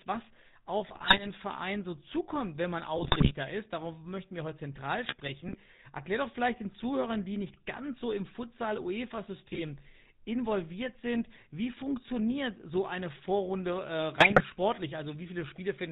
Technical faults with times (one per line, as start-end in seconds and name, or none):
0.00-15.92 GSM full-rate codec
0.87-1.26 GSM bit errors
2.96-3.34 GSM bit errors
5.04-5.56 GSM bit errors
9.52-9.64 GSM bit errors
14.16-14.43 GSM bit errors